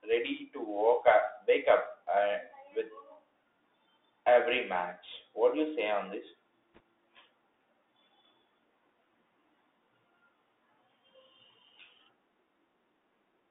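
From start to finish the speech passes through a Bluetooth CVSD headset codec. Its one-bit up/down coding, consistent with a 64 kbps link, leaves a narrow band of roughly 300 Hz to 3.6 kHz with scratchy sibilants and granular hiss. A spectrogram shows nothing above 3.6 kHz and a noise floor under the speech.

From 6.75 to 6.80 s, bit errors on the Bluetooth voice link, at around one and a half percent, add a brief rushing crackle with no sharp clicks. The waveform shows a short, fuzzy thickening, and the spectrogram shows broadband speckle within the band.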